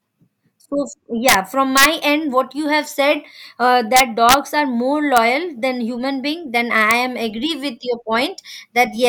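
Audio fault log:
1.29–1.34 s, 1.77–1.85 s, 3.97–4.34 s, 5.17 s and 6.91 s: integer overflow. Loud speech peaks, up to about 4 dB past full scale, wrap to the opposite sign instead of being clamped, so each one flips across the whole range and snaps harder than clipping would.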